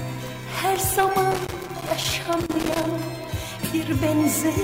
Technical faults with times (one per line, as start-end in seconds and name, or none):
1.31-2.94 loose connector crackle